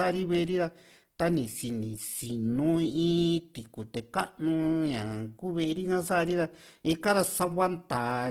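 Opus compression runs through this whole speech clip and is plainly audible, likely from encoding in Opus's music (CELT) mode at a low bitrate, which fits a rate around 16 kbps. Short of bits, the encoder preserves each band's energy but fills the detail with noise or folded copies of lower bands. The voice therefore turns rough and grainy rather than swirly, while the bandwidth stays full, with content reaching about 20.1 kHz.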